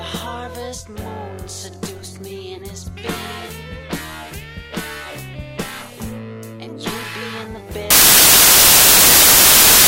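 At 7.90 s the audio turns into loud, harsh broadband noise that lasts to the end at 9.87 s: samples built from the wrong bytes. The reader misassembled each sample's bytes, so the rapidly changing low-order bits landed in the high-order positions and dominate every value.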